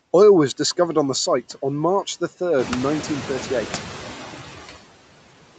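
Throughout the speech, noise suppressor artifacts are audible. The suppressor lowers the background by about 13 dB in bands it treats as steady noise, so the noise sinks in pauses and swells under speech. A spectrogram shows speckled, flickering low-level patches between syllables.

From 2.58 to 4.03 s, the noise suppressor is catching up. The room noise jumps by about 12 dB around two and a half seconds, and the suppressor's estimate takes 1.45 s to adapt, cutting only about 6 dB at first. The waveform shows a raised noise floor that gradually shrinks back down.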